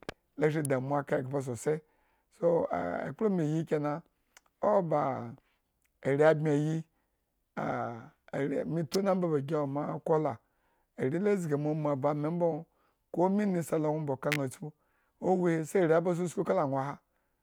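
At 0.65 s, between "la shri" and "aka ghba sosai", a sharp snap sits on top of the speech. Another follows at 8.94 s, after "ari me" and before "omba ba gi", and a third, louder cluster spans 14.32 to 14.36 s. These are electrical switching spikes, likely from a nearby switch or motor arcing into the line. Peaks reach about -15 dBFS, and the last reaches about -10 dBFS. On a waveform each shows as a needle-thin spike, and on a spectrogram as a narrow vertical stripe across all frequencies.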